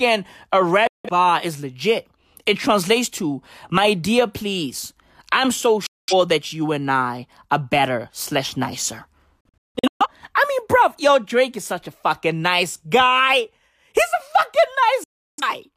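Four digital broadcast dropouts punch holes in the speech. Each one snaps to silence with only a 3 ms fade, as the receiver mutes on bad frames until clean ones arrive. The first, 0.87 to 1.09 s, loses about 170 ms right before "bar is legit". At 5.86 to 6.13 s, after "dear please I'm so", about 210 ms drop. At 9.41 to 10.07 s, after "are better slash nicer", short gaps scatter across 0.6 s. The last runs 15.04 to 15.43 s.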